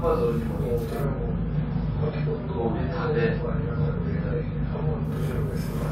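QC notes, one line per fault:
Throughout, channel delay (doubling): one channel arrives 40 ms behind the other, and summing them to mono gives every attack a second, equally loud copy just after it. At that spacing the ear hears a tight slap or doubled hit rather than a distinct echo. On the waveform each transient shows a twin peak 40 ms later. On the spectrogram, the summed copies produce regular comb notches spaced 25 Hz apart across the band.
1.05 to 5.05 s, adaptive stream at a lower bitrate: for these four seconds the treble vanishes and the sound turns dull and watery, with swirling codec artefacts. The loss is consistent with the stream dropping from about 128 to 24 kbit/s MP3 while the connection slowed. The waveform shows no gap at either switch. The spectrogram shows a hard ceiling at 5.7 kHz that starts and ends abruptly at those times.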